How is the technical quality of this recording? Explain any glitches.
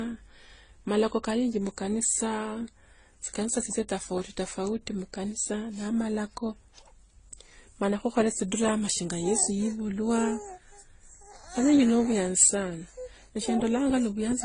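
The technical quality is compromised throughout by stacked compression damage. From start to finish the speech shows transcoding between lossy codecs: nothing sounds above about 9.7 kHz, with swirly, smeared artefacts layered over each other. The likely cause is an MP3 encode near 33 kbit/s passed through Opus and then AAC-LC, each stage re-encoding the previous one's flaws. Unlike a single low-bitrate encode, the result mixes several distinct kinds of distortion at once.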